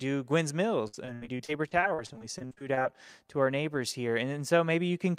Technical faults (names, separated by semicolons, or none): repeated packet loss (robotic sound)